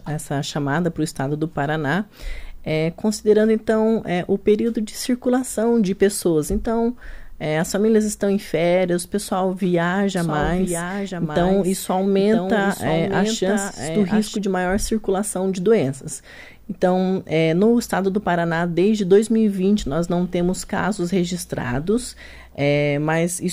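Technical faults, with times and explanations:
10.17–14.37 s, doubled audio track: a second full-band copy of the sound runs about a second behind, around 5 dB quieter, with no decay or room colour, and it cuts in and out abruptly. Most likely, the audio was captured twice, once through a slower path.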